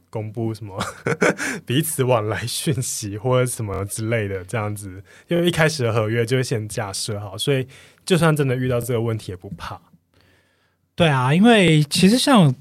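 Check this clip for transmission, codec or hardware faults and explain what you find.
The clip has one kind of fault, a repeated buffer, occurring five times in the speech. At 3.74 s one short slice of about 23 ms plays three extra times, at 5.36 s and 6.97 s twice extra, and at 8.82 s and 11.68 s once extra. The output device ran short of fresh audio and replayed its last block, which fits a 1024-sample buffer. Each event is heard as a brief stutter or buzzy click, and the speech then carries on with nothing skipped. On the waveform, identical segments of about 23 ms sit back to back with hard joins. On the spectrogram, thin vertical lines mark each join, with a short stretch of repeated pattern between them.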